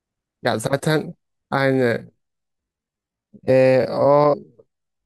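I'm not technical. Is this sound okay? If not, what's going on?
No. From 1.6 s to the end, software likely slowed this part of the speech to about 0.57 times its normal pace while keeping the pitch, giving a time-stretched section. The talking suddenly drags.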